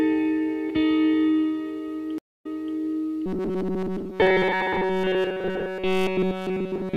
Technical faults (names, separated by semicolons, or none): stream reconnect; robotic sound from repeated short buffers